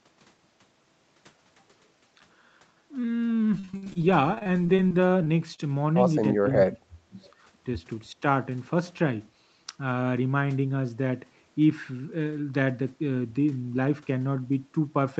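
From 3.59 to 5.60 s the speech turns choppy and robotic, with short holes filled by a continuation of the previous sound. This is repeated packet loss: audio kept going missing, the longest gap about 51 ms, and concealment covered roughly a fifth of that stretch.

Between 6.38 and 7.17 s the speech sinks sharply, fading out for most of that interval, with the deepest dip about 35 dB down. The likely cause is speech suppressed in double talk: the echo canceller could not tell the near talker from far-end echo and turned both down.

At 7.21 to 7.33 s a faint copy of earlier speech surfaces, trailing the original by 356 ms and sitting about 35 dB below it. This is likely an echo leak, where loudspeaker sound picked up at the far end slipped past its canceller and came back.

From 7.66 to 8.01 s the speech sounds rushed, running at 110% speed with the pitch unchanged. This is a jitter buffer speed-up: to reduce excess buffered delay, the receiver cut out short pitch-period slices, roughly 40 ms in all.

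At 8.12 to 8.22 s there is a brief, shallow dip of about 5 dB, again likely speech suppressed in double talk. The call path's 8 kHz bandwidth can be heard as nothing present above 8 kHz.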